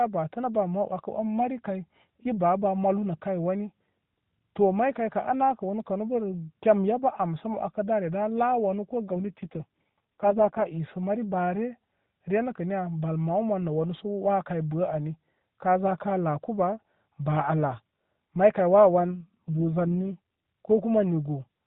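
From 9.08 to 10.65 s and again from 18.99 to 20.19 s, the speech turns rough, buzzy and synthetic without any gap or band change: an AMR rate drop, consistent with the narrowband codec falling from 12.2 to 4.75 kbps to protect a weak link.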